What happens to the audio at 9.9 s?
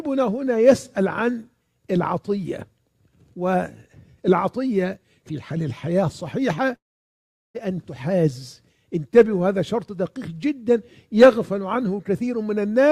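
Nothing goes wrong at 9.9 s: the audio plays through that moment cleanly, with no dropout, click, distortion or other fault.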